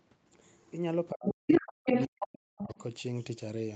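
Speech, with the other side's voice leaking through at 0.44 to 0.71 s, faint at about 35 dB below the talker. It returns at 1.27 to 1.32 s, 1.48 to 1.6 s and 1.86 to 2.26 s, now level with or up to about 10 dB louder than the talker. This is likely loudspeaker echo that the canceller failed to remove. Speech is suppressed in double talk from 1.11 to 2.77 s: the talker's voice dips, at worst by around 40 dB, across roughly a second and a half. The likely cause is the echo canceller mistaking the overlapping talk for echo and turning the talker down along with the echo. The audio has nothing above 8 kHz, consistent with call microphone processing.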